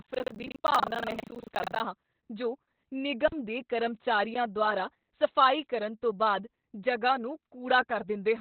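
The whole clip of speech carries Opus voice compression at heavy damage. Nothing sits above 4 kHz. That narrowband limit, with the SILK linear-prediction coder and 20 ms frames, fits a bitrate near 8 kbps. The predictor's excitation is coded coarsely at that rate. The speech sounds muffled and hoarse, with a faint robotic edge. Sibilants lose their brightness because the band stops so low.

From 0.0 to 1.83 s there is buffer tearing. It clears just before "ਹਾਂ ਜੋ". The writer and the reader of the output ring buffer have drifted and now cross inside each period. So roughly a third of every buffer replays audio from about 70 ms earlier. Each such stretch has hard joins on both sides. The result is a steady robotic rattle at 25 Hz, riding on the speech wherever it is present.

At 2.22 s comes an underrun with held sample. The output ran dry for 11.6 ms, which fits a 512-sample buffer. The converter held its last value, so the waveform freezes flat. 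The sound cuts out almost silently. About 10 ms of live audio was lost.

A second underrun with held sample runs from 3.28 to 3.32 s, about 43 ms. Around 40 ms of audio went missing.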